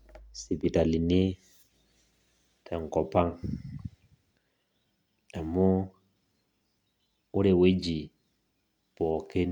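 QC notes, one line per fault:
No faults heard anywhere in this speech recording.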